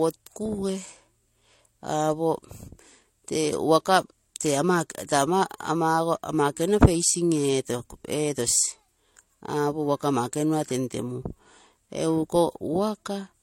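Throughout, the speech shows transcoding between lossy codecs: two layers of coding artefacts overlap, with nothing above 16.2 kHz, likely HE-AAC re-encoded as MP3.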